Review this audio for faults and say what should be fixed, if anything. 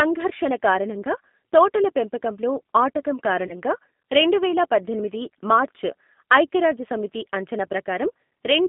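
The whole call passed through the G.729 codec at 8 kbit/s, which rebuilds the signal from a vocal tract filter, a pitch predictor and a few fixed pulses per 5 ms subframe instead of sending the waveform itself. Everything sits between 200 Hz and 3.6 kHz, so the speech is narrowband and thin. The codec damage is plainly audible as a rough, slightly synthetic texture. To prevent this, negotiate a wideband codec such as G.722 or Opus when both endpoints support it.

VoIP packet loss concealed by the speech codec occurs from 3.47 to 3.53 s. About 30 ms of the stream never arrived, which fits three consecutive 10 ms frames. During that gap the decoder kept repeating its last pitch period and filter shape at decreasing gain, so the sound is stretched out and fades. Because each frame depends on the one before, the speech stays weak or distorted for tens of milliseconds after real packets resume. 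To prevent this, reduce loss on the network path with QoS prioritisation for voice traffic, and enable forward error correction or redundancy in the codec setup.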